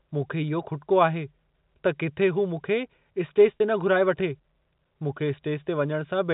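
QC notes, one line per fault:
3.57 to 3.60 s, packet loss with pitch repetition: a brief held, buzzy sound lasting 30 ms, where the dropout was bridged by repeating the last pitch period.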